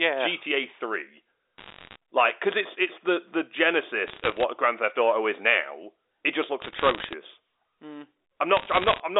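Speech over a telephone line, limited to the usual narrow band with nothing above 4 kHz, carries four bursts of bit errors on a digital phone line, at 1.58–1.96 s (just before "like because it's it's"), 4.08–4.43 s, 6.62–7.14 s and 8.57–9.00 s. Flipped bits corrupt individual samples, so the speech underneath is intact but overlaid with sharp ticks and crackle. The first burst is the densest, which suggests an error rate of a percent or more. On a waveform these show as isolated one-sample spikes, and on a spectrogram as thin full-height vertical lines.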